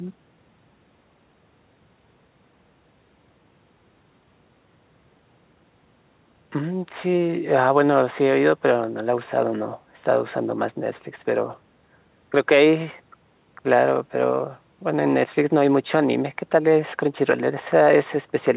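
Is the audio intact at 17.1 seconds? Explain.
Yes, the speech at 17.1 seconds is intact, with no dropout, glitch or other fault at that moment, only the narrowband call sound of the WebRTC call path, which carries nothing above 4 kHz.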